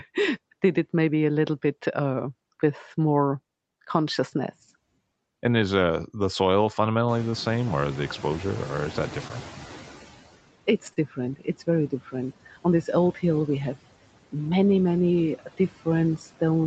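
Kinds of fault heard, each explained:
Noise suppressor artifacts: A noise suppressor turns down each frequency band it judges to be steady noise, frame by frame. Here it removes about 16 dB of the room noise. The background drops in the gaps between phrases and comes back up beneath the speech.
Noise suppressor catching up: The room noise jumps by about 23 dB at roughly 7 s, just after "is uh the soil". The suppressor's noise estimate is still set for the quieter room. So the louder noise comes through with little reduction at first. Over about 2.9 s, from 7.08 to 10.03 s, the estimate catches up. The noise then sinks steadily until the cut reaches about 12 dB.
Short stall from a late packet: A packet arrived after it was due, and the jitter buffer ran dry. The receiver held the last sound until the packet came, then carried on from the same point. Nothing is lost, but a sound is stretched. 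At 7.30 s it is held for 26 ms. At 10.93 s it is held for 31 ms. Each stall gives a faint buzz or dip, and the timing slips slightly.
Short concealed packet loss: At 9.28 s, about 20 ms of audio never reached the decoder in time. The receiver covered the gap by extending the preceding sound for about 16 ms. It used the pitch for voiced sound and shaped noise for unvoiced sound. Then it blended back into the real signal. The result is a brief smear or wobble, and a short sound at that spot may be missing.
Speech cut by the noise suppressor: In three places, the suppressor mistook part of the speech for noise and turned it down with the background. This happens between 10.67 and 11.18 s, between 11.36 and 11.68 s, and between 11.90 and 12.14 s. The drops are about 16, 15 and 13 dB. Each affects roughly a tenth to a sixth of a second. Soft consonants and word endings there sound swallowed or faint.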